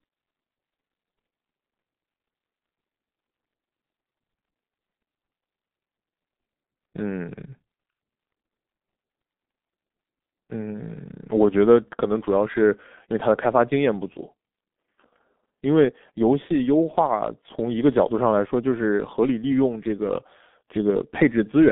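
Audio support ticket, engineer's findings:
Muffled, hoarse speech start to finish, nothing above 3.8 kHz, band roughly 200 Hz to 3.5 kHz. Looks like a G.723.1 codec leg, fits a ~6 kbit/s path. Coarse 30 ms frames and a slow-updating voice model smear consonants badly.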